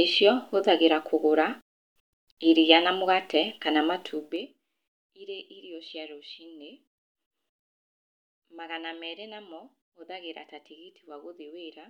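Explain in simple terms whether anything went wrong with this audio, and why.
Zipper noise appears from 4.12 to 4.56 s in this speech, while the volume is pulled down by a large amount. Instead of sliding smoothly, the level drops in small separate jumps, about twenty a second. Each jump makes a tiny click, and those rapid clicks run together into a ticking, zipping sound laid over the speech.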